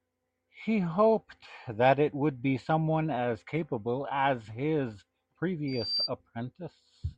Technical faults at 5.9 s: loudspeaker feedback squeal

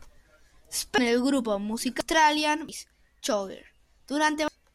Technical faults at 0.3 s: none

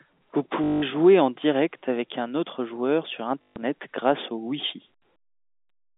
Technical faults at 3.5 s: packet loss with last packet repeated

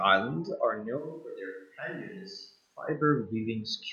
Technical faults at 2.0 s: switch to a distant microphone

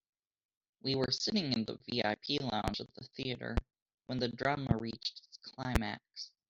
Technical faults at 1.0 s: loud pop

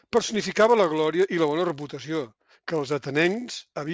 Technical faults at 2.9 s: resampler restarted on every block

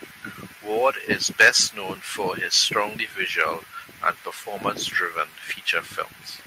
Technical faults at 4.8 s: none

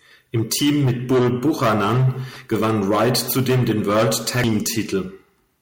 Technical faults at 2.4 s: damaged data in a compressed stream

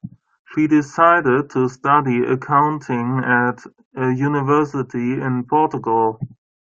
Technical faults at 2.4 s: none

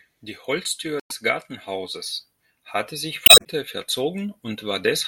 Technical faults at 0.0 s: none

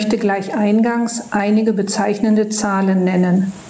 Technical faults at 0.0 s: gain pumping

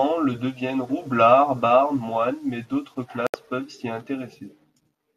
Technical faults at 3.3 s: digital broadcast dropout

